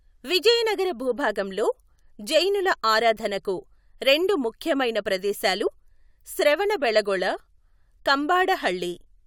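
At 5.66 s, just after "ఆరాధనకు రెండు ముఖ్యమైన ప్రదేశాలు", compressed frames are skipped: about one frame, around 20 ms of speech, never plays. The audio jumps ahead rather than going silent.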